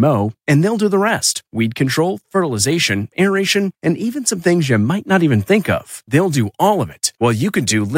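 Nothing in the speech stood out as a technical problem on listening.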